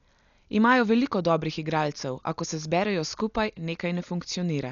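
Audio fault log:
throughout Dolby Digital compression: the speech was likely squeezed through an AC-3 style encoder at a very low bitrate, which fits roughly 48 kbps. It cut the band above 7 kHz and left many lines to dither noise, so it sounds dull, with heavy rough, fluttering grain.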